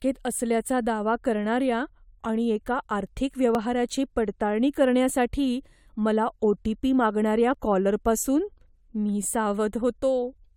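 At 3.55 s, after "करणाऱ्या आणि एका आर्थिक", and at 7.54 s, after "ओ टी पी मागणाऱ्या", overlap between stream segments trims about 6 ms at 4-second segment boundaries, causing tiny skips, sharp waveform discontinuities and thin vertical spectrogram lines.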